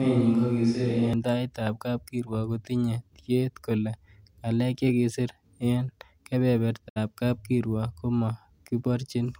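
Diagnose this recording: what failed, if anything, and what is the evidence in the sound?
From the start to 1.13 s the speech sounds roomy and hollow, with thin bass. The level barely changes, and faint room noise sits about 40 dB below it. The cause is likely a switch to a distant microphone at the capture stage, ending abruptly.

A digital broadcast dropout occurs at 6.88 s. The sound fades out over about 20 ms and stays silent until 6.98 s. The receiver muted for 64 ms while its decoder rejected bad data, which fits two lost frames. That audio is gone.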